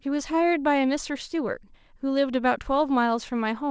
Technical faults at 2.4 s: none

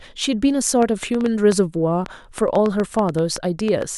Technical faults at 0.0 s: none

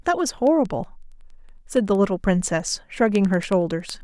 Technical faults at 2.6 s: word clock ticks

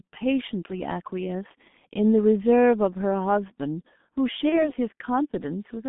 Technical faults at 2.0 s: G.723.1 codec

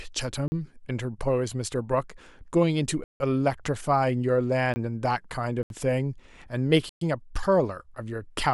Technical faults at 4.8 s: block of digital silence

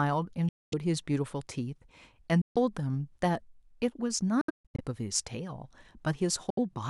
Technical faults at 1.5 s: none

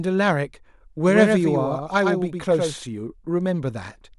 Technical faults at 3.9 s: none

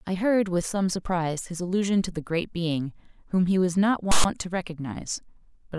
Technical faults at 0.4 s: none

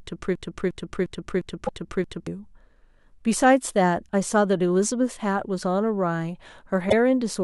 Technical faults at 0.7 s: broken-record loop

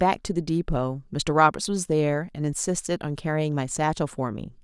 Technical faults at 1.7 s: none

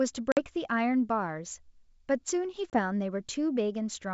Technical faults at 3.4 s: none

